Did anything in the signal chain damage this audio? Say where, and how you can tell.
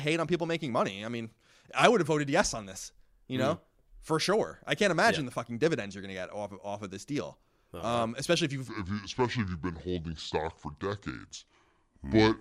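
Yes. From 8.68 s to the end at 12.40 s, the speech falls into a section at the wrong speed. It plays at 0.674 times normal speed, dropping about seven semitones, so it sounds deep and slow. Speed and pitch shift together. This likely comes from playback or editing against the wrong clock.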